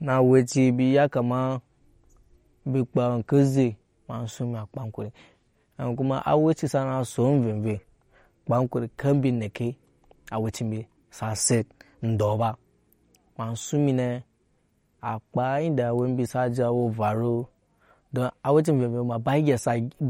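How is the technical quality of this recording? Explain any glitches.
Quality is audibly degraded throughout by MP3 compression. A starved encoder, likely running near 47 kbps, discards weak frequency lines and cuts everything above 17.6 kHz, leaving the speech watery, swirly and metallic on s sounds.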